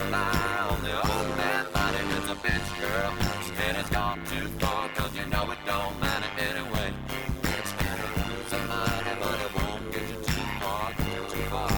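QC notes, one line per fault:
Throughout, overlap-add ripple: the audio was split into windowed frames and rejoined with an overlap whose gains never sum to a constant, so the level dips by about 60 dB once per frame, around a hundred times a second, giving a harsh, robotic buzzing tremolo.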